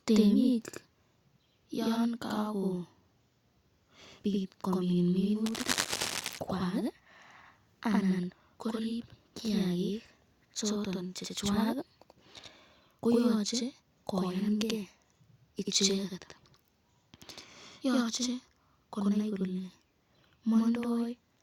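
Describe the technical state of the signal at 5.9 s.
At 5.9 s the speech sits under a dense, ragged burst of scratching and rustling, running from 5.46 s to 6.30 s, just after "yon kakopit komin". The burst is nearly as loud as the voice, only a few decibels below it. This is cable scratch noise: the crackle most likely comes from a worn cable, connector or control being disturbed, so its contact resistance jumps about erratically and injects uneven noise into the signal.

Underneath that, the voice is also heard twice, with a same-level slap following each syllable about 85 ms later. That is channel delay (doubling), and it is present through the whole clip. One channel arrives late by a fixed amount, which fits a 4096-sample buffer, and when the two channels are summed to mono the late copy stands apart as a distinct echo instead of merging with the original.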